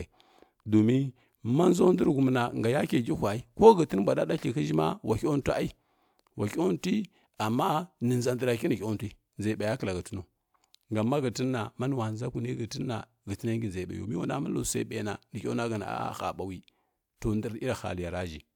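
Nothing goes wrong at any point in the speech here, so there's no technical fault to point to.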